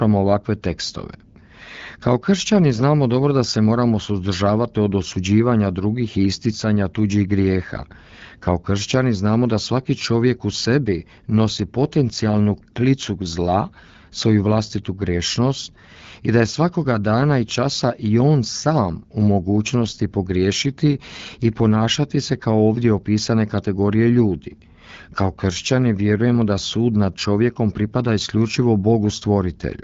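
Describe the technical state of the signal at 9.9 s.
At 9.9 s the signal is intact, with no fault at that moment as the speech passes through the AMR wideband (HD Voice) codec link at 12.65 kbit/s.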